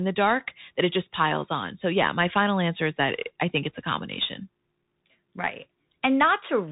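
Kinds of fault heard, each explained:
Bluetooth CVSD headset codec: the speech sounds boxed-in and narrow, with no content above 4 kHz, scratchy s sounds, a grainy hiss beneath it, and loud bright moments that smear and distort. A one-bit slope coder at 64 kHz, tracking the waveform up or down with an adapting step, can't keep pace.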